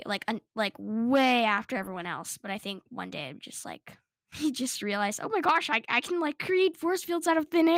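No dropouts, clicks, distortion or timing faults are audible anywhere in this speech recording.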